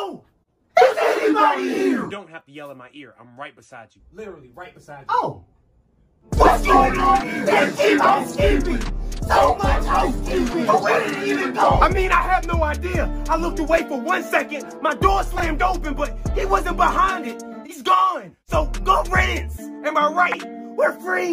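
At 15.38 s, two short pieces of audio play in the wrong order, a case of chunks out of order. A 20 ms chunk arrives one chunk late and plays after its successor. The jumble lasts until 15.42 s. Nothing is missing, but the order is wrong. At 20.26 s it happens again. This time a 20 ms chunk lands three chunks late. That leaves a longer garbled stretch, up to 20.34 s.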